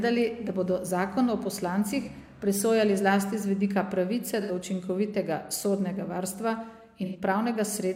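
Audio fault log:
2.02–2.08 s, 4.41–4.51 s and 7.05–7.17 s, AAC frame loss with concealment: short smeared, noisy or phasey patches where the decoder rebuilt missing audio from the preceding spectrum. The first gap is about 43 ms and the other two about 85 ms, which fits one and two lost frames.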